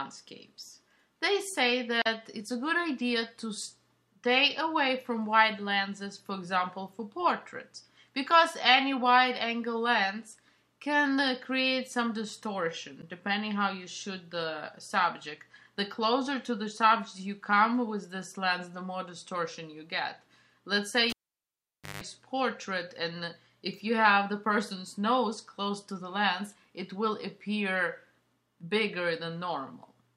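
A cable pulled and plugged in interrupts the sound from 21.10 to 22.03 s: a pop, about 0.88 s of near silence, a 0.16 s burst of 50 Hz mains buzz as the plug's tip touches alone, then a second pop. The buzz separates it from a plain dropout.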